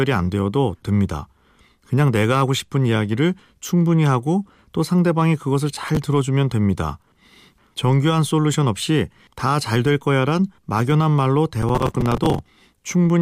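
The speech picks up processor overload crackle twice: a short burst from 5.75 to 5.97 s, then a longer stretch from 11.62 to 12.39 s. The processor kept missing its buffer deadlines back to back, and each miss replayed a sliver of old audio with hard edges, which fits buffers of around 5 ms. A handful of misses makes the first spot gritty, and a few dozen turn the second into sustained tearing.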